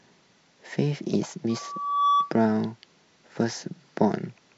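From 1.49 s to 2.36 s a loudspeaker feedback squeal rises over the speech: a single tone at 1.2 kHz swells over roughly half a second until it sits about 5 dB above the voice. The microphone was hearing its own loudspeaker, and at that frequency the loop gain passed unity, so the tone kept feeding itself. A spectrogram shows one bright horizontal line brightening to a plateau, and the waveform's envelope grows into a dense band.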